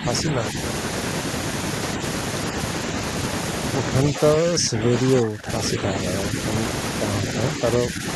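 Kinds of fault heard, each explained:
Speech suppressed in double talk: the speech level dips in five stretches, deepest from 3.93 to 5.5 s at about 15 dB, likely an echo canceller treating overlapping far-end talk as echo. The waveform envelope pinches there, and the spectrogram turns fainter.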